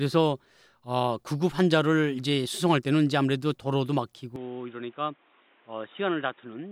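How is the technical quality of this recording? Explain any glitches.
The recording has one fault. From 4.36 s to the end, the speech turns dull and boxy, with nothing above 3.8 kHz. The level drops about 10 dB. New background noise sits roughly 30 dB below it. There is no gap. The likely cause is an input switched to a poorer, narrower-band device.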